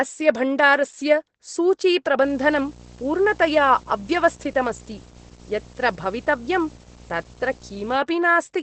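From the start, the speech carries Opus voice compression in its SILK mode. The coder keeps a wideband picture but nothing above about 8.5 kHz, and it models the excitation coarsely, so consonants sound dulled and the voice slightly hoarse and synthetic. That combination fits a rate around 12 kbps. Unlike a simple low-pass filter or MP3 swirl, the roughness follows the voice itself, a vocoder-like graininess rather than watery pre-echo.

From 2.23 s to 7.96 s, video or display buzz sits under the speech at roughly 15 dB below it. A screen or video cable is coupling into the audio path, giving a raspy buzz at the 59.94 Hz field rate with hash layered above it and a thin whistle at the 15.7 kHz line rate. Mains hum is smoother and sits at 50 or 60 Hz. This buzz is harsher, and the line-rate whistle marks it as coming from a display.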